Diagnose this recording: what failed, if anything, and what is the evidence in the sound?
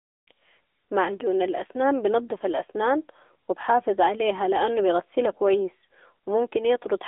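Codec stage: the whole clip went through an AMR narrowband mobile codec, consistent with its 10.2 kbps mode. The speech is confined to about 300 Hz to 3.5 kHz, nothing survives above 3.7 kHz, and the codec's buzzy, synthetic colouring is plainly audible.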